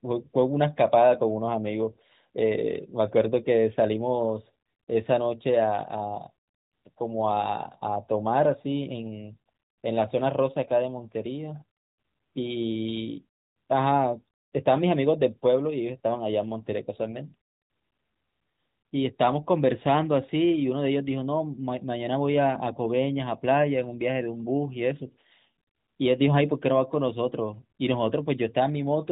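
The speech carries no technical faults.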